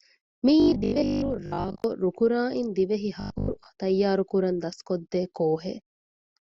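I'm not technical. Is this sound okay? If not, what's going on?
No. The audio likely arrived too slowly, so the player kept repeating its last 20 ms of sound. This causes robotic sound from repeated short buffers, a stiff, metallic 50 Hz buzz over the voice. It happens from 0.60 to 1.84 s, where most of the sound is repeated, and from 3.20 to 3.66 s, where about half is, just before "ތައްޔާރުކުރަން ދަސްކޮށްދޭ".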